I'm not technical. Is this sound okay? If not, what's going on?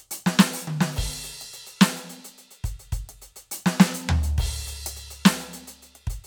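Yes, this music clip sounds fine, with nothing going wrong in how it was recorded or played back.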